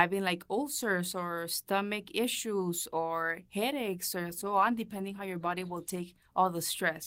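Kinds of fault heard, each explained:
Call bitrate drop: At about 4.3 s, right after "issues or headaches or", the speech turns coarser as the call's bandwidth estimate falls. The encoder is told to spend fewer bits, dropping from 32 kbps to roughly 15 kbps. It holds at that low rate for about 1.5 s. Fewer bits mean rougher, watery coding, and the top end gets trimmed, so the speech sounds muffled. Quality returns by about 6.9 s.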